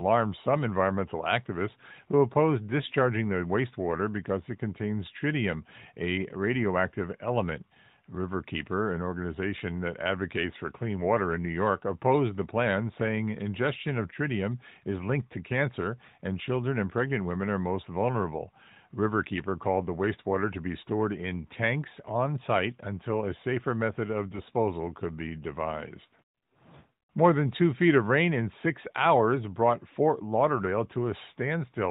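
From 24.30 to 24.51 s, AMR bit errors corrupt a short run of frames in the narrowband mobile codec, a span that fits about eleven 20 ms frames, with a few percent of the lightly protected bits flipped. Excitation pulses and fine gain and spectral values land wrong, so the speech keeps its rough pitch and level but turns hoarse, scratchy and gargly.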